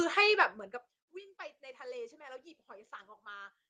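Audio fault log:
0.34–1.02 s, zipper noise: a rapid ticking rides on the speech as it fades down by roughly 25 dB. The level falls in unsmoothed jumps of about 3 dB, around ten per second, and each jump leaves a small click in the waveform.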